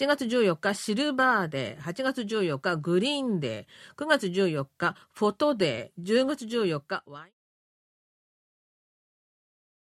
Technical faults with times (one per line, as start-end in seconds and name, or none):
none